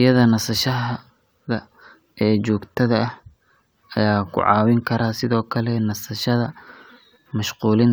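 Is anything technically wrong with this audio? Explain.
No, nothing in this speech recording stands out as technically wrong; it all sounds just as it should.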